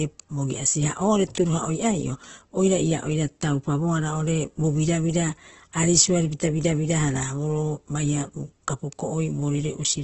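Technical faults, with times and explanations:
throughout, Opus compression: the speech sounds rough and grainy, with a noisy texture over its tones, and nothing can be heard above about 8.1 kHz, so it comes across dull and narrow. The cause is likely heavy Opus coding in its music (CELT) mode at a very low rate, one that fits around 12 kbps. Short of bits, the encoder keeps each band's energy but fills in the detail with folded copies or noise, and it trims the bandwidth to wideband.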